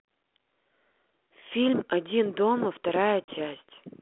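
At 3.24 s a packet loss on an ADPCM call cuts about 40 ms, roughly two packets, to silence: a hard-edged gap in the waveform and a blank vertical strip on the spectrogram. The 32 kbit/s G.726 decoder's predictor and step size then run out of step with the sender's, giving slightly distorted speech until about 3.37 s.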